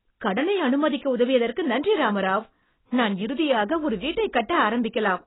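From start to finish the speech sounds dull and smeared, with nothing audible above about 3.9 kHz, a watery warble on held vowels and a fizzy, hollow edge on sibilants. This is heavy AAC compression, likely AAC-LC at a very low rate, around 16 kbps. Short of bits, the encoder drops the cut-off and quantises the remaining spectrum so coarsely that bands go missing or get filled with substitute noise, which causes the wobble and fizz.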